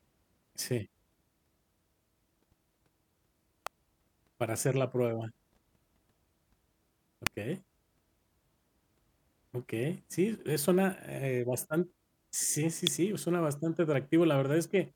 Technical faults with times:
3.67 electrical switching spike
7.27 electrical switching spike
12.87 electrical switching spike

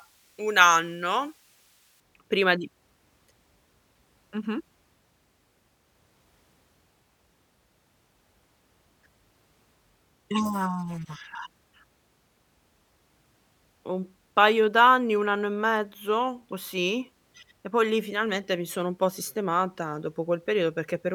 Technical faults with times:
0.00-2.00 pre-emphasis left on

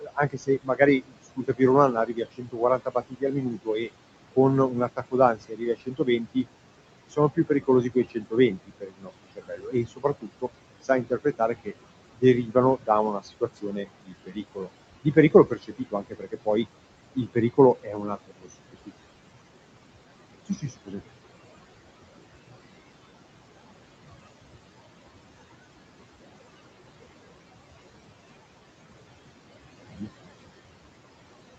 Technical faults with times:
0.00-31.58 noise suppressor artifacts
0.00-6.46 speech cut by the noise suppressor
7.08-18.91 speech cut by the noise suppressor
20.46-21.02 speech cut by the noise suppressor
29.89-30.10 speech cut by the noise suppressor

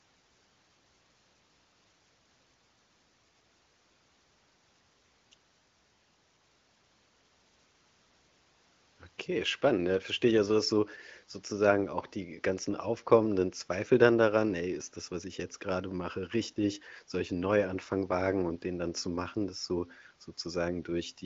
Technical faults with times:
none

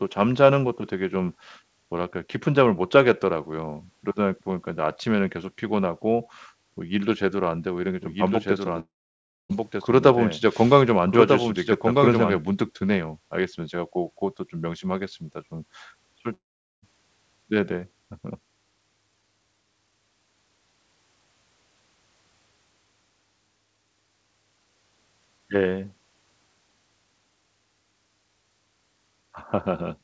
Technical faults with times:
8.02-12.37 doubled audio track
8.80-9.51 long network dropout
16.33-16.84 long network dropout

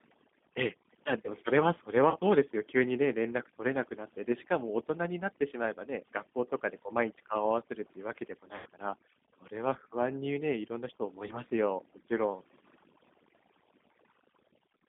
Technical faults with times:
0.00-14.88 overdone noise removal
0.00-14.88 G.729 codec
2.10-2.17 VoIP packet loss concealed by the speech codec
8.56-8.67 VoIP packet loss concealed by the speech codec
11.28-11.37 VoIP packet loss concealed by the speech codec

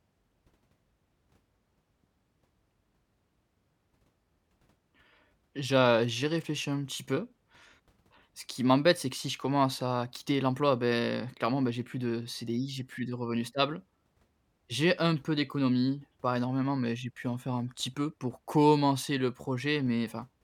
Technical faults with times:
none

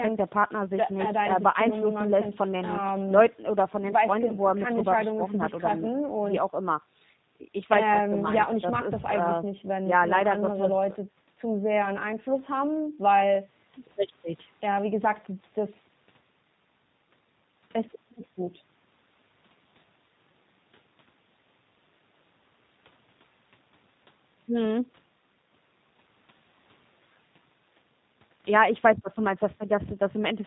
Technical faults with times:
0.00-30.46 G.729 codec

